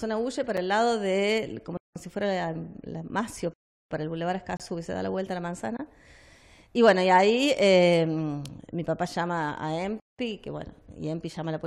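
Two kinds of hard-edged dropout break up the sound. Gaps between stream segments appear at 0.57 s, 4.57–4.60 s and 8.61 s, roughly every 4 s, which fits segment boundaries whose timestamps fail to meet, leaving holes of about 6 to 27 ms. On a waveform each is a brief flat line, and on a spectrogram a thin empty vertical stripe. Blocks of digital silence cut in at 1.77–1.96 s, 3.54–3.91 s, 5.77–5.79 s and 10.00–10.19 s, lasting about 186, 372, 22 and 186 ms. Three of those lengths fit whole 8192- and 16384-sample buffers left unfilled in time. Each shows as a dead-flat waveform section, or a blank spectrogram column, with hard edges where the signal stops and restarts without any fade.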